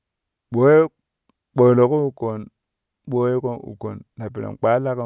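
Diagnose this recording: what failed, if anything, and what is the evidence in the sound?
Nothing failed in this recording.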